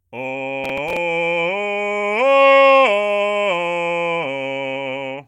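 From 0.64 to 0.97 s a gritty crackle tears across the music: processor overload crackle, with roughly seven missed 5 ms buffers each replaying stale audio.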